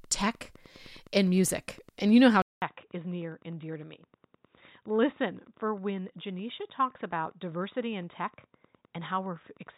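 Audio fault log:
throughout Wi-Fi interference: steady ticking every 102.4 ms, about 30 dB below the speech, from a nearby radio's beacon being rectified in the audio circuit.
2.42–9.78 s input switched to a poorer device: after a 200 ms silence, speech turns dull with nothing above 3.8 kHz, roughly 5 dB quieter, likely a lesser microphone taking over.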